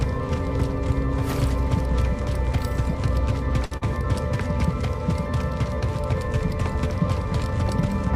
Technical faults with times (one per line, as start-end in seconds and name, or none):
3.65-3.73 short stall from a late packet
3.77-3.83 short concealed packet loss